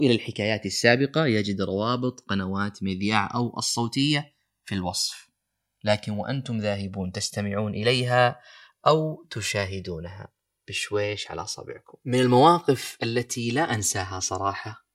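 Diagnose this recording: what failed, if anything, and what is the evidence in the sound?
A slow flanging runs through the whole speech clip when the channels are summed to mono, with comb notches sweeping gradually through the spectrum. This is channels drifting apart at the converter stage: two devices on separate clocks, roughly 150 ppm adrift, letting the interchannel delay slide to about 3 ms by the end.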